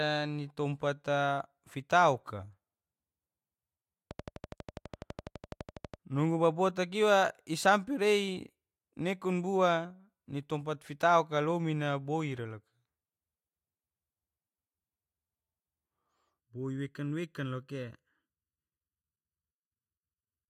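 From 4.11 to 5.95 s, a regular train of clicks ticks at 12 per second, about twenty clicks rising roughly 5 dB above the speech. Likely interference or a faulty connection or supply.

From 16.4 s to the end, channel delay causes comb filtering. One channel lags by under a millisecond, so mono summing carves fixed notches from around 700 Hz, sounding hollow.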